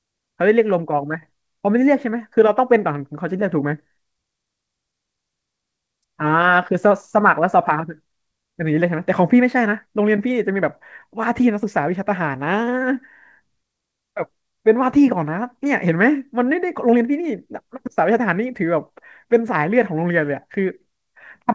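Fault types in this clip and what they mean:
Clock drift between sender and receiver: The sending side's audio clock runs faster than the receiving side's, by roughly 4 percent. Audio arrives slightly quicker than it is played out. The jitter buffer keeps filling up. The receiver must discard short pieces to stop it overflowing. This pressure lasts the whole clip, so small timing hiccups recur throughout the speech. They come at uneven intervals, not on a steady beat.
Repeated timing corrections: These are the receiver's edits in response to that drift. Across nearly the whole clip, from 0.05 s to 21.51 s, it keeps cutting short slivers of audio to stay in step. The net effect runs at 104 percent speed, so the speech moves slightly faster than it was produced. Every edit goes the same way, removing audio, but the spacing is irregular. Each cut is tiny, heard, if at all, as a faint skip or an unsteady pace.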